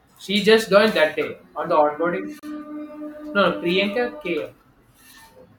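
At 2.39 s, a gap between stream segments opens. Segment timestamps leave 34 ms unfilled, heard as hard-edged silence until 2.43 s. No speech is lost.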